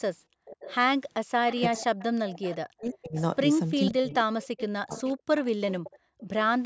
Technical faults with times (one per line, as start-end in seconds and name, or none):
0.28-0.45 background gated by the echo canceller
0.45-0.75 echo leak
1.50-3.21 echo leak
1.68-3.17 speech suppressed in double talk
3.86-3.91 echo leak
3.90-5.15 speech suppressed in double talk
4.45-6.26 echo leak
5.99-6.18 background gated by the echo canceller